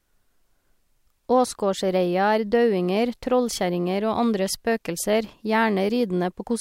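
No technical faults are audible in this speech recording.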